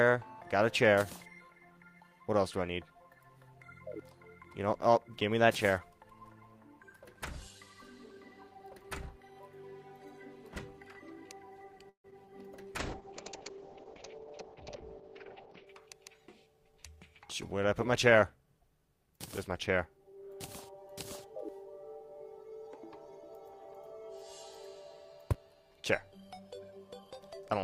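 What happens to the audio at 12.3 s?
At 12.25 to 12.28 s there is a short concealed packet loss. About 20 ms of audio failed to reach the decoder in time, and the receiver covered the gap with roughly 10 ms of synthesized continuation, extending the preceding sound before cross-fading back into the real signal. The result is a brief smear or wobble lasting a few hundredths of a second, where the sound momentarily wobbles rather than cutting out to silence.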